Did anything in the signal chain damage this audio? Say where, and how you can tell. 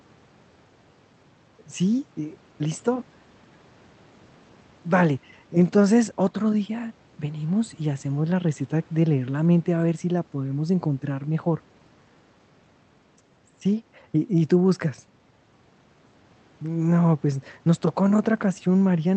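No, the speech sits well above a room background about 35 dB down, and the call codec's band limit near 8 kHz is the normal behaviour of that path rather than damage from any stage of the chain.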